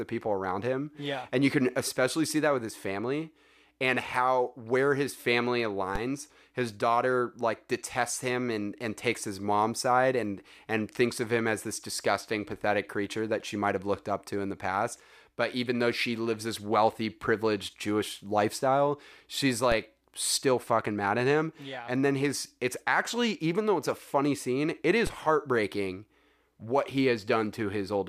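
At 5.96 s, after "how where his family", at 19.72 s, between "lifestyle she's" and "still fucking mad at", and at 25.07 s, before "heartbreaking what he", a DC step of about -20 dBFS shifts the waveform's zero line. A 20 Hz high-pass then bleeds it away, leaving a brief low thump each time.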